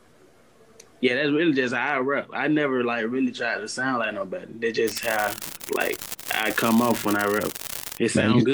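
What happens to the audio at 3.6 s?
Nothing goes wrong at 3.6 s; the audio runs straight through that point with no audible fault.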